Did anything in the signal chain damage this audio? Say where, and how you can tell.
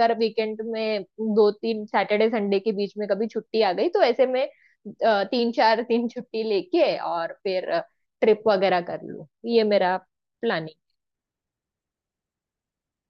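No, nothing in the signal chain has audibly damaged this speech recording; the signal reaches the listener intact at every stage.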